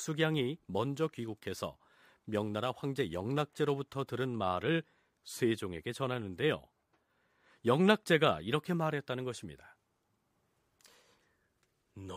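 From 0.53 to 4.27 s the speech carries crude rate conversion. Samples were simply repeated, with no filter, which fits a 44.1 kHz to 48 kHz change. The jagged error sits about 30 dB down. It sounds like a gritty, inharmonic fizz on louder sounds.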